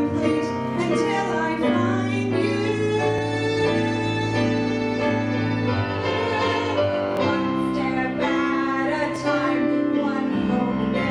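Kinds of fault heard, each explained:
Overlap between stream segments: segment timestamps overlap, so the player trims away real audio, and the waveform jumps, giving tiny skips at 3.18, 7.17 and 9.16 s.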